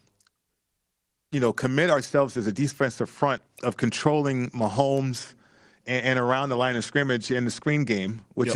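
No technical faults can be heard anywhere in this speech recording.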